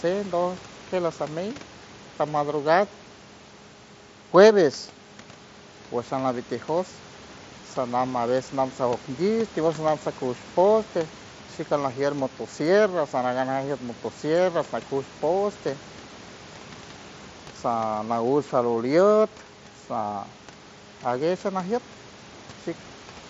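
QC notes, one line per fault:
No faults to note for this speech clip.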